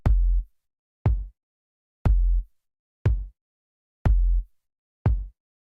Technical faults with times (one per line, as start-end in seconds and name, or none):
none